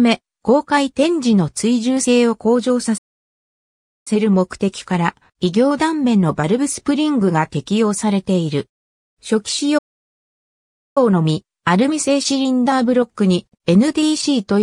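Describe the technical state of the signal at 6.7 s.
No fault is audible at 6.7 s, and the signal is intact at that point.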